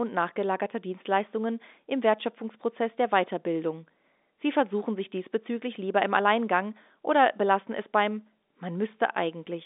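No faults are audible in the speech, which carries the band limit of G.711 A-law telephone coding, with nothing above about 3.8 kHz.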